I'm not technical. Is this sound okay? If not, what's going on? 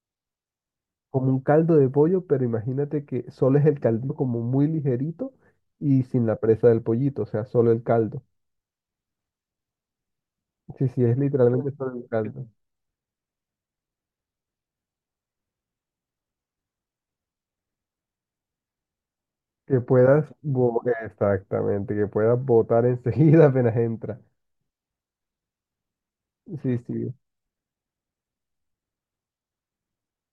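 No. At 4.09 s there are compressed frames skipped. This speech is stored as a stream of short compressed chunks, each about 23 ms long, and a few of them were never played, either lost from the file or rejected by the player as damaged. The speech jumps forward by roughly a tenth of a second, which fits about four chunks going missing.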